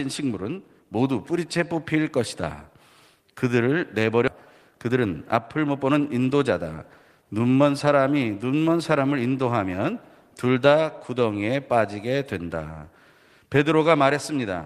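At 4.27 s the speech skips ahead: close to half a second of audio was discarded while later audio was already queued, and the two sides are joined with no gap. A waveform shows an abrupt seam, and the spectrogram shows formant tracks breaking off and restarting mid-pattern.

From 4.71 to 6.75 s a jitter buffer speed-up follows. The receiver repeatedly trimmed pitch-period slices, about 150 ms in total, to shrink excess buffered delay, so speech runs 6% fast at unchanged pitch. Harmonics keep their spacing while syllables appear compressed in time.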